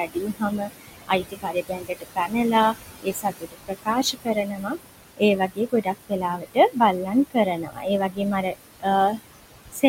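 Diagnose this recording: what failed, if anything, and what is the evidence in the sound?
The call-processing stage failed: its noise suppressor is working too hard across the whole clip. It pulls the steady background down by about 20 dB frame by frame wherever a band looks like noise. The room noise, which sits only about 10 dB below the speech, therefore dips in the gaps and swells back under each phrase.

The same noise suppressor is cutting speech, mistaking parts of the talker's signal for noise. From 0.06 s to 8.86 s, roughly four seconds' worth of the speech gets pulled down with the background, by about 21 dB at the deepest. Soft consonants and word endings sound swallowed or go faint. It happens again from 9.53 s to 9.83 s, where a brief stretch of around 200 ms is attenuated by the same amount.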